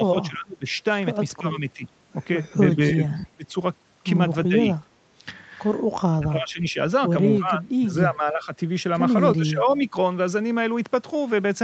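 The speech dips and thins in pieces at 0.11–0.67 s, 1.38–1.85 s and 2.76–3.55 s. This is speech suppressed in double talk, likely an echo canceller muting the talker while the far side spoke. The drops are as deep as about 30 dB. Inside that third stretch, at 3.15–3.24 s, a faint delayed scrap of voice trails about 326 ms behind, roughly 25 dB down. That is an echo leak, likely loudspeaker pickup that the far end's canceller let through. The same suppression returns at 4.48–4.55 s, 6.2–6.78 s, 7.39–8.52 s and 9.36–9.96 s, with the longest losses in the 7.39–8.52 s stretch.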